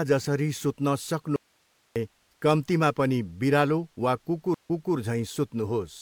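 At 1.36 s the speech vanishes abruptly into an audio dropout to a faint residue, lasting about 0.6 s until 1.96 s. The gap holds only steady hiss, roughly 40 dB below the speech level. On a waveform the envelope collapses to a thin flat band with vertical edges. A spectrogram shows a sharp-sided block of uniform broadband noise. The likely cause is a brief loss of the wanted signal while the path after the break stayed live.

At 4.54 s a stream reconnect occurs. After a 111 ms silence the speech resumes about 0.3 s earlier than where it broke off, so a short stretch is heard twice. The decoder restarts cold, and the audio eases back in over the first moments up to 4.95 s. On a waveform there is a clean silent gap and then a soft ramp. A spectrogram shows a blank vertical strip followed by a repeat of the preceding pattern.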